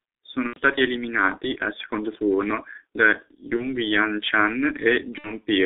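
The whole clip has passed through the G.723.1 codec at a low rate that points to about 6.3 kbit/s. It keeps only about 300 Hz to 3.6 kHz and models the voice coarsely, so the speech sounds muffled and hoarse, with smeared consonants.

VoIP packet loss concealed by the speech codec occurs three times. Each time the decoder stretched its last frame as the level fell, producing a fading buzzy tone or coloured noise, and the speech stays weak for a moment after packets return. The first, from 0.47 to 0.60 s just before "eliminati al secondo turno", fits about 90 ms of lost audio, or three 30 ms frames. The second, from 3.56 to 3.75 s right after "al secondo turno da", fits a single lost 30 ms frame. The third, from 5.18 to 5.31 s, fits two lost frames, about 60 ms.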